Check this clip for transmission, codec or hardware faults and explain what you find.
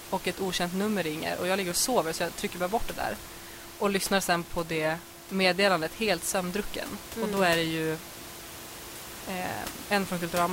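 Nothing here points to a transmission, codec or hardware problem, and the room noise sitting about 14 dB under the speech is simply part of the space the microphone was in.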